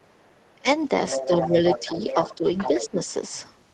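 From 0.01 to 0.49 s a very faint second voice sits far beneath the speech, about 40 dB down. This is the other side's voice leaking through, likely loudspeaker playback that the echo canceller failed to remove from the microphone.

At 0.56 to 0.68 s the talker briefly sinks by as much as about 20 dB. This is speech suppressed in double talk: with both sides active, the canceller likely could not separate the talker from the echo and turned both down.

From 1.09 to 2.89 s the leaked voice returns much stronger, only about 5 dB under the talker.

While the two overlap, the talker dips again, gently by about 5 dB at 1.27 to 1.56 s, then by about 10 dB at 2.36 to 2.45 s and at 2.82 to 3.08 s. Each dip is brief and likely comes from the same double-talk suppression.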